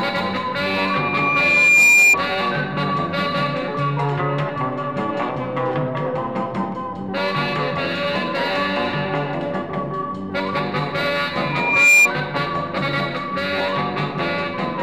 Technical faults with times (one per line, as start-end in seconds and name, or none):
0.60-2.17 loudspeaker feedback squeal
11.42-12.08 loudspeaker feedback squeal